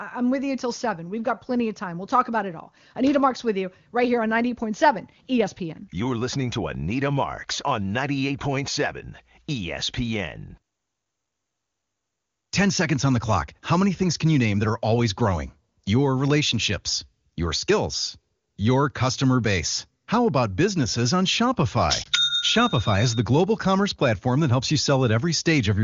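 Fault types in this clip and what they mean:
Lost AMR speech frames: At 22.03 to 22.09 s a single 20 ms speech frame fails its checksum, and the AMR-WB decoder fills the gap by repeating the previous frame's pitch and vocal tract settings at reduced gain, heard as a brief dip or warble. On a waveform the envelope sags for roughly one frame. On a spectrogram the harmonics flatten and smear for that instant rather than leaving a clean gap. The surrounding 23.85 kbit/s wideband speech stays clear.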